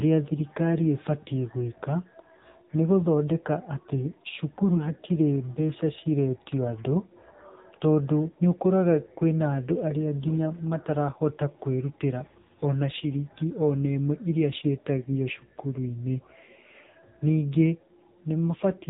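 Throughout the clip the speech passes through the AMR narrowband mobile codec at a heavy compression level, which fits a low AMR-NB mode near 6.7 kbps. Nothing above 3.8 kHz survives, so the voice sounds muffled, buzzy and distinctly synthetic.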